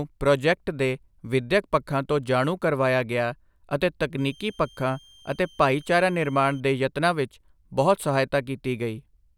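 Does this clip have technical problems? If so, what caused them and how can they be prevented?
Yes. From 4.18 to 6.60 s, just after "ਜਾਣੂ ਕਰਵਾਇਆ ਗਿਆ ਅਤੇ", a switching supply whistle sits about 30 dB below the speech, drifting between 3.12 and 3.19 kHz as a power converter cycles audibly. A spectrogram shows a thin, slightly wavering horizontal line. A well-filtered or linear supply prevents it.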